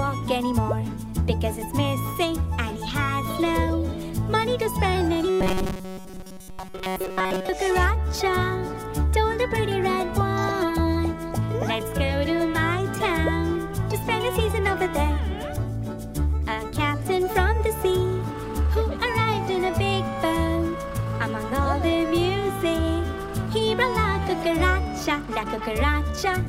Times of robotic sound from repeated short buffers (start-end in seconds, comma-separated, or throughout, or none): 5.30-7.49